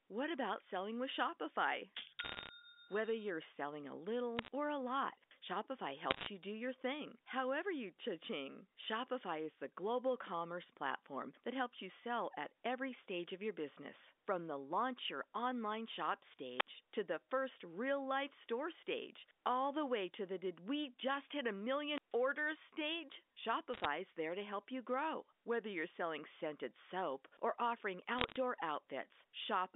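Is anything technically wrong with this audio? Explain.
Yes, two kinds of fault show up on what's clearly a narrowband phone line (roughly 250 Hz to 3.6 kHz, the band of G.711 A-law at 64 kbps).

The first is bit errors on a digital phone line, in five short bursts: 2.24–2.49 s, 4.37–4.48 s, 6.11–6.27 s (just before "you do your thing"), 23.74–23.85 s (between "orders stage" and "there to help you"), and 28.19–28.36 s. Flipped bits each corrupt a single companded sample, and when the sign or a high-order bit goes, that sample jumps way off. You hear sharp ticks clustering into a brief crackle over speech that is unchanged underneath, consistent with an error rate somewhere around a percent or less.

The second is wireless microphone squelch dropout, twice. At 16.58–16.67 s, between "launch your online shop" and "to the first real", the radio link fades far enough that the receiver's squelch shuts the output, leaving a hole of about 61 ms. 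At 21.91–22.15 s it happens again with a longer mute of about 137 ms. Each one sounds like a quick surge of hiss, a gap of near silence, then the speech snapping back.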